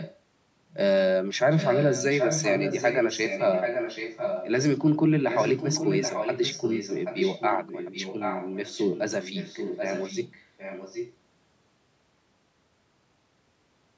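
A delayed copy of the speech trails the speech by about 0.78 s. It is faint from 0.0 to 0.2 s. It returns much stronger from 1.57 to 4.5 s, nearly as loud as the direct sound. It is weaker again from 5.29 to 11.15 s. This is echo leak. A far-end loudspeaker likely fed the microphone, and the echo canceller let part of it back into the call.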